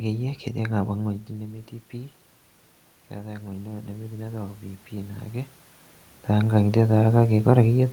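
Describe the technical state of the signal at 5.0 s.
At 5.0 s the speech and the room noise behind it are swelling together, a slow lift in level rather than a jump. This is automatic gain rising, running from 3.13 s to 5.31 s. The input fell by about 11 dB, so the gain control judged the signal too quiet and brought its gain up gradually by about 5 dB. Because it amplifies everything it receives, the background rises along with the voice.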